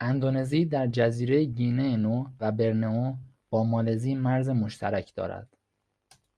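Compressed frames skipped at 2.39 to 2.45 s in this speech recording: the audio lurches forward, losing about a tenth of a second of material, which fits around ten codec frames of 10 ms each going unplayed, either absent from the stream or rejected by the decoder as corrupt. At the seam the speech abruptly picks up further along.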